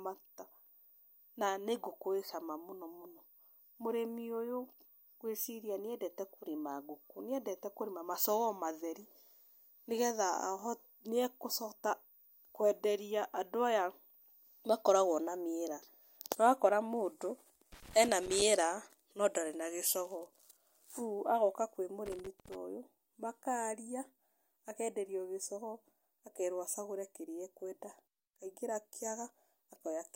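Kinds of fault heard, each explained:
Loose connector crackle: irregular bursts of scratchy crackle break into the speech from 17.72 to 18.42 s and again from 22.06 to 22.55 s, just before "ũyũ makaria". A worn or dirty contact is rapidly making and breaking, chopping the signal.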